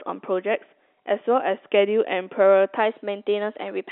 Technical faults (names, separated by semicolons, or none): drift correction step